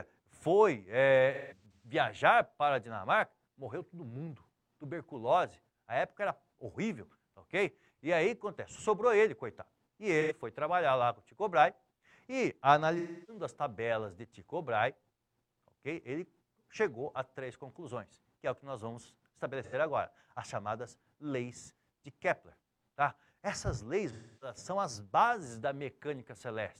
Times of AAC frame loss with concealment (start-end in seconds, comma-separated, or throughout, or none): 1.33-1.90, 10.21-10.32, 12.98-13.43, 19.63-19.74, 24.11-24.56